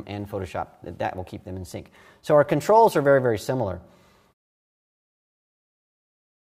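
Nothing technically wrong here; the level eases down in a smooth fade-out at around 4.3 s, an ordinary editor's tail with no click or hard edge.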